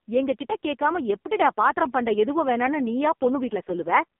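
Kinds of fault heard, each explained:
AMR narrowband mobile codec: throughout, the speech is confined to roughly 200 Hz to 3.6 kHz, with nothing above. The voice is rebuilt from a vocal-tract model fed sparse pulses and sounds heavily buzzy and synthetic, which fits AMR-NB's lowest rates, around 5 kbps.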